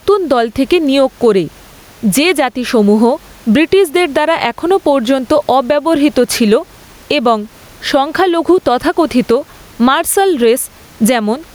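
Gain pumping runs throughout the speech, most likely from a fast limiter clamping over-high microphone gain. Background noise swells by around 10 dB between phrases and ducks under each loud syllable, so the waveform's envelope looks flattened and the noise floor on the spectrogram rises and falls with the speech.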